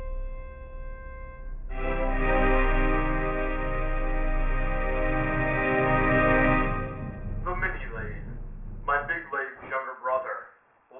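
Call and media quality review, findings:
Aliasing, throughout. Gritty, metallic top end with pitches that don't belong. Spectrogram shows energy running hard up to about 3 kHz, then nothing, with mirrored components folding back below that edge at around 20 dB under the signal. Probable component: resampler, likely without an anti-alias filter. Fits a downsample to 6 kHz.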